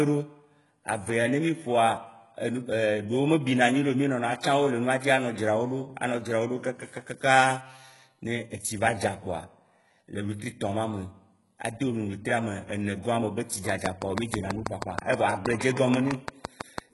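Throughout, the speech shows heavy damage of the kind likely left by HE-AAC compression, at a rate that fits a bitrate around 12 kbps. Only the lower spectrum is coded directly; the treble is rebuilt by spectral band replication, copying lower bands upward under a coarse envelope, and nothing remains above 11.4 kHz. Because the rebuilt treble's harmonics do not line up with those below the crossover, s sounds come out gritty, metallic or lispy.

From 13.69 s to 16.79 s a train of clicks runs over the audio: about twenty near-identical pulses at a regular 6.15 per second, standing about 20 dB above the signal. Evenly spaced, same-shaped pulses like these likely come from an outside source injecting energy, such as interference from nearby equipment or a faulty connection or power supply. They are heard as steady ticking laid on top of the sound.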